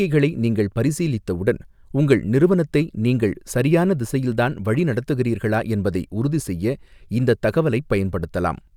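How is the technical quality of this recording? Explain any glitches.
No technical faults can be heard in this speech recording. Nothing in it calls for an explanation.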